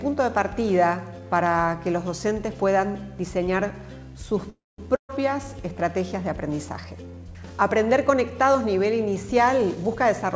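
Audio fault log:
4.50–4.88 s, call audio freeze: the last sound hangs on and fades, drops to about 0.22 s of silence, then picks up right where it left off with nothing lost. That's likely packets held up in transit, leaving the jitter buffer empty for a moment.
4.95–5.11 s, burst of packet loss: roughly 140 ms of audio is gone. The receiver stretches the last sound into a fading tail that sinks to silence for about 100 ms, then the audio jumps ahead past the missing chunk instead of resuming where it stopped.
9.58–10.35 s, jitter buffer speed-up: this end stretch plays at about 120% speed with the pitch unchanged, so it sounds rushed. The buffer had too much audio queued up and trimmed it by snipping out tiny pitch-period slices, around 150 ms in total.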